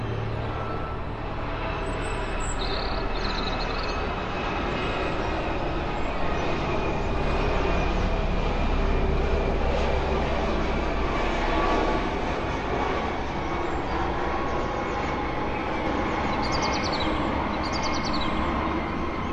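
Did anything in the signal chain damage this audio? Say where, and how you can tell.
Yes: a doubled audio track runs from 15.86 s to the end, where a second full-band copy of the sounds enters abruptly about one second behind at roughly equal level, with no decay or room colour. This likely comes from an edit or a slower second capture path.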